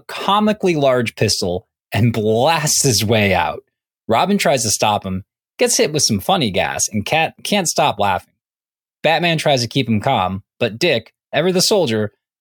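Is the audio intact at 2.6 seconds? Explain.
Yes, the speech at 2.6 seconds plays through intact, with no audible fault at that moment.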